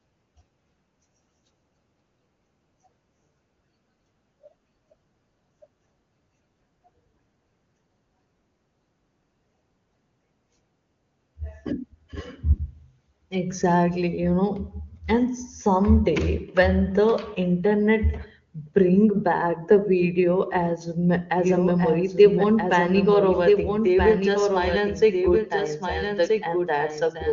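A doubled audio track runs from 21.39 s to the end of this speech clip: a second full-band copy of the speech enters abruptly, trailing the original by about one and a half seconds and sitting only about 5 dB lower, with no decay or room colour of its own. This is likely caused by the same signal being captured a second time through a slower path and mixed back in. The AMR wideband (HD Voice) codec, running at 23.85 kbit/s, leaves the speech clear throughout.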